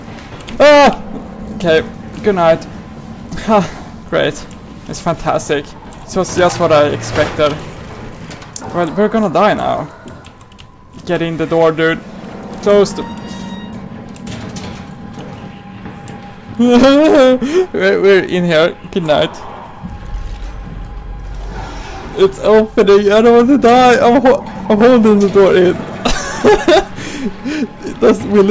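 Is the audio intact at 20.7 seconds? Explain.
Yes, the audio is intact at 20.7 seconds, with no audible fault at that moment.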